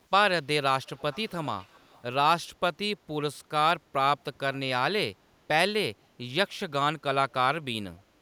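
From 0.85 to 2.02 s a faint echo leak repeats speech 298 ms late, a distinct copy unlike reverb's smear, likely speakerphone echo escaping cancellation.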